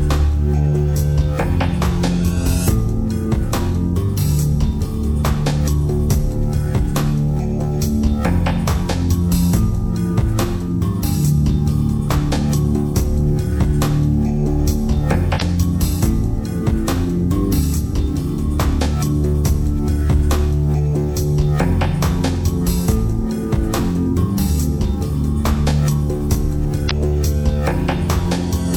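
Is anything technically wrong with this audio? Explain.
Yes. At 15.38–15.42 s and 26.87–26.91 s there is damaged data in a compressed stream: corrupted bytes leave the decoder misreading frames and hunting for the next valid header, so the sound breaks into a short chirp, squawk, click or hole lasting about 40 ms each time.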